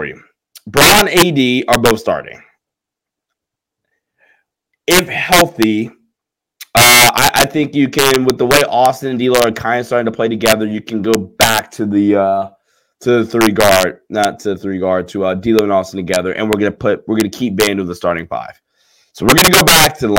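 Speech carrying integer overflow throughout: driven about 9 dB too hot, a small fraction of peaks wrap to the opposite sign, giving violent cracks rather than clipping's flattened buzz.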